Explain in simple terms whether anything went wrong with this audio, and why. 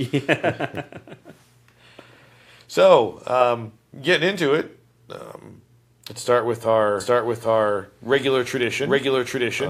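Doubled audio track from 7.0 s to the end: the speech repeats about as loudly, roughly seven tenths of a second late, likely from a second, slower recording path.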